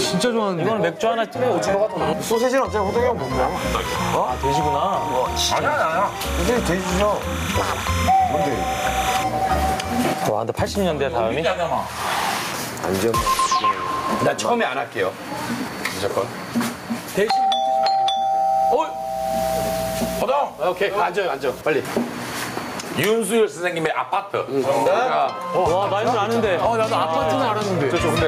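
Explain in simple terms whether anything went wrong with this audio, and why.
Two problems can be heard.

Gain pumping runs through the whole recording. The level keeps getting pulled down whenever something loud happens, a large swing in level. The likely cause is that the recording level was set far too high, so an automatic level control kept clamping down on every loud sound. Loud and soft parts end up squashed together.

Timecode bleed appears from about 3.56 to 9.24 s. Behind the main sound there is a quiet, steady chirping warble that flips between two pitches around 1 kHz and 2 kHz. That is a synchronisation signal, running at 30 frames per second, leaking in from a neighbouring cable or track. It sits well below the main sound.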